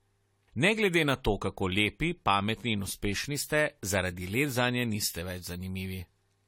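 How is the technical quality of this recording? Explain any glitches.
The technical quality is compromised by generation loss, which runs through the whole speech clip. The sound is swirly and hollow, with smeared consonant attacks and a gritty, shifting noise layer. Content stops at about 17.3 kHz. The likely cause is repeated lossy re-encoding, around five passes, in a way that fits AAC-LC at 64 kbit/s. Each pass quantises on a fresh frame grid. Errors and spectral holes accumulate, so the damage exceeds what that bitrate alone would cause.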